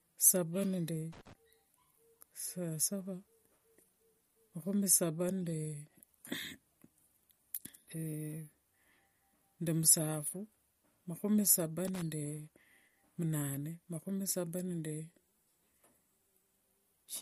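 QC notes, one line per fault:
Throughout, MP3 compression: the speech has a watery, swirly texture and nothing above 15.2 kHz, which fits a starved encoder at around 48 kbps. With too few bits, it chops the treble and lets weak detail flicker between frames, so it's likely MP3 at fault.
1.13 to 1.33 s and 11.88 to 12.02 s, loose connector crackle: two short, irregular bursts of scratchy crackle, each about 0.2 s or less. That's a worn or dirty contact making and breaking, chopping the signal on and off so it scratches.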